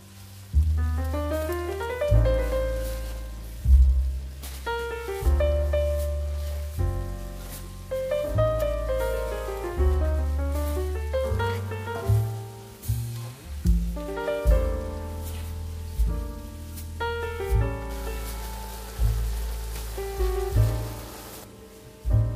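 Nothing stood out as a problem at any point while listening to this recording.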